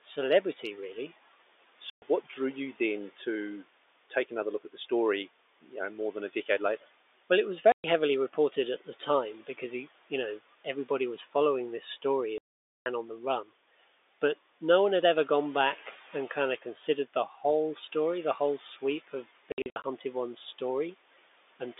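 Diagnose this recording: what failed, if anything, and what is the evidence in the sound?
Noise suppressor artifacts, throughout, at the call-processing stage: the background sinks about 16 dB between phrases and rises under speech, through frame-by-frame band gating.

Packet loss filled with silence, at the network stage: hard-edged holes at 1.9 s (120 ms, before "what drew you then"), 7.72 s (120 ms), 12.38 to 12.86 s (480 ms), and scattered gaps from 19.52 to 19.84 s after "the whole sweep of". The lengths fit 20 ms packets.

Speech cut by the noise suppressor, in call processing: at 11.24 s, between "you know everybody was" and "this story", about 100 ms dips by about 13 dB. At 13.44 s it dips by about 12 dB. The gate mistook soft speech for noise.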